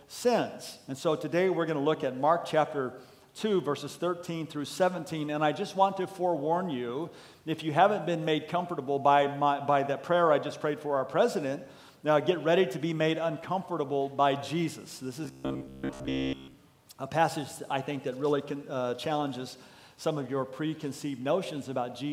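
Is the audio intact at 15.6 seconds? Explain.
No. From 15.25 to 16.55 s the audio turns into robotic sound from repeated short buffers: a rigid, metallic buzz at 66.7 Hz. The likely cause is new audio arriving too late, so a roughly 15 ms slice is looped over and over, replacing most of the real signal.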